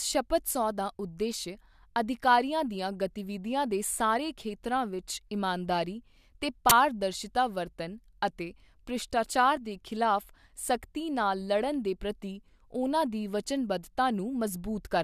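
At 6.70 to 6.72 s, an uninitialised buffer reached the output: a 20 ms block was sent for playback before any audio had been written into it, so whatever values were left in that memory were played as samples. Those values have no relation to the speech around them, so the block cuts in as an abrupt crack or short burst of digital noise, breaking the speech for the length of the block.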